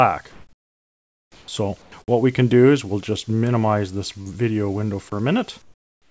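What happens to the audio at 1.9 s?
From 1.82 to 1.92 s, comfort noise in place of the background: for 100 ms the real background, about 30 dB below the loudest parts, becomes a steady, featureless hiss about 5 dB quieter. This is likely from discontinuous transmission, with the receiver synthesising noise. Unlike a dropout, the gap is filled with noise rather than silence.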